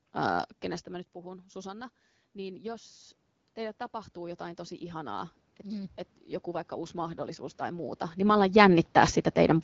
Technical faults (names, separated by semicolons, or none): automatic gain rising; AMR rate drop